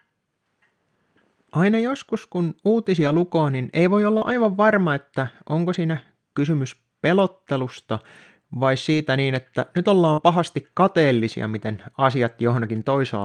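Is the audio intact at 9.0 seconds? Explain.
No. From 8.93 to 8.99 s, ending right at 9.0 s, there is a lost packet rebuilt from error correction. Two packets went missing, and the decoder filled the 40 ms from the low-bitrate backup copies carried in the following packets, which fits two 20 ms Opus frames. The sound never drops out, but it turns briefly grainier and noisier. Ordinary packet loss concealment instead smears or buzzes an extrapolated guess, and a true dropout leaves silence.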